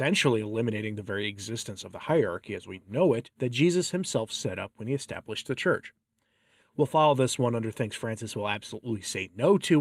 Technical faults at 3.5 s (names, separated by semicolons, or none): none